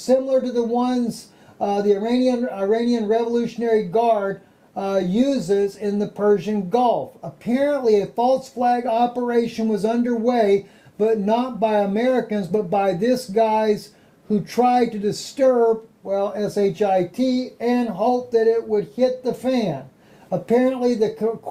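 Nothing here trips the ear at all: the sound runs along steadily with no glitches, dropouts or odd moments to point to.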